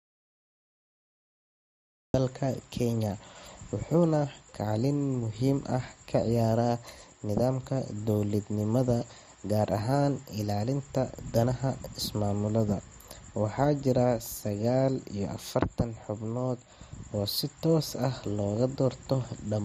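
The speech opens on dead silence: from the very start until 2.14 s there is nothing at all, not even room tone, and the speech then comes in abruptly as though already under way. This is an audio dropout to silence, most likely from the input signal being lost, through a disconnected device, a failed link or a mute, while the recorder kept writing silence, so whatever was spoken in that opening stretch is gone.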